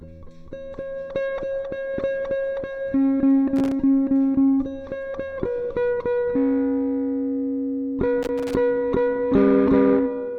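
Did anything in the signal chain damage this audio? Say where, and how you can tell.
Yes. Loose connector crackle in the analogue wiring: irregular scratchy bursts at 3.56–3.72 s and 8.23–8.54 s. A worn contact making and breaking chops the signal. A waveform shows jagged gaps and spikes, and a spectrogram shows ragged broadband vertical streaks.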